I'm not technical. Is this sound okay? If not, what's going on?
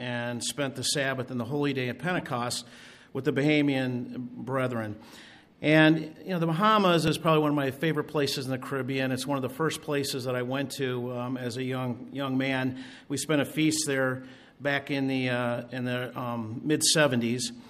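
No. At 2.16 to 2.21 s and again at 16.01 to 16.06 s there is a brief chirp or burst of noise. This is a corrupt frame decoded: a few chunks of the compressed audio were damaged, but the player played them anyway, putting sound at the wrong pitches.

At 7.08 s there is a tiny jump in the sound. The likely cause is a dropped buffer (overrun): the computer didn't collect a few thousandths of a second of audio in time, so that piece was lost and the two sides were joined.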